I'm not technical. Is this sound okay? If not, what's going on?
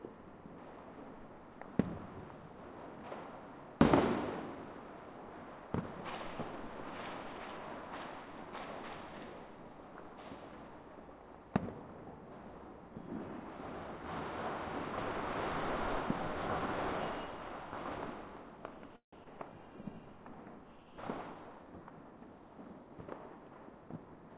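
No. There are three short faults.

Call audio freeze, 18.96 to 19.15 s: the sound stalls for about 0.16 s. It trails off into a brief fading buzz, then about 0.11 s of silence, before carrying on from where it stopped. This likely happened because data arrived late and the playback reserve ran dry. Nothing is lost, but a gap is inserted.

Skip ahead, 19.24 to 19.27 s: just after the freeze, playback jumps forward, dropping roughly 70 ms of sound. The two sides are joined almost directly, so the listener hears a tiny abrupt jolt where a sliver of audio vanished.

Jitter buffer speed-up, 21.34 to 22.12 s: to catch up after the earlier delay, the receiver trimmed many tiny slices, about a tenth of a second in total. For this stretch the sound plays about 12% faster at the same pitch, so it feels rushed.

The whole clip also passed through a phone-call codec, so nothing above 4 kHz is present, which gives it a narrow, telephone-like tone.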